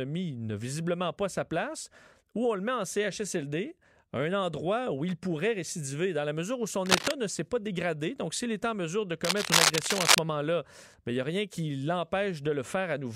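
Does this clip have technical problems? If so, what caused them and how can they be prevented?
Yes. Cable scratch noise, rough rustling bursts slightly louder than the speech, occurs at 6.86–7.12 s and 9.24–10.19 s. It is likely caused by a worn connector whose contact resistance jumped as it moved. Replace worn cables and secure connectors before recording.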